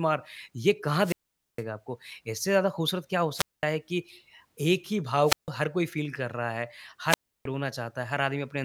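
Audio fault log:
1.01–7.46 s, wireless microphone squelch dropout: four dropouts, at 1.01–1.63 s, 3.34–3.65 s, 5.24–5.50 s and 7.07–7.46 s. In each, hiss or static briefly swells, the speech cuts to a hole of near silence, then returns. The holes last 0.46 s, 0.21 s, 0.15 s and 0.32 s. The FM radio link is fading until the receiver's squelch mutes its output, then reopening as the signal recovers.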